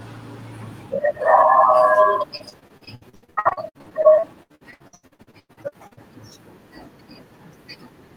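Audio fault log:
2.37–5.99 s: repeated packet loss (robotic sound). The speech turns choppy across this stretch as audio keeps dropping out, with 37 separate gaps, the longest about 99 ms. Each hole is bridged by stretching the sound that came just before it, so roughly two-fifths of the span is patched rather than real. Because fills arrive in quick succession, the repeated, extended fragments take on a robotic character with pieces of the speech missing.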